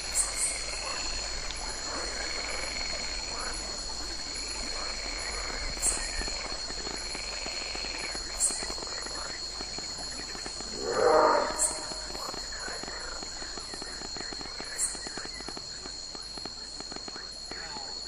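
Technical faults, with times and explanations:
5.06–17.78 s, train of clicks: about 6.3 irregular, similar pulses per second, roughly seventy, peaking about 10 dB above the sound, likely from interference or a faulty connection.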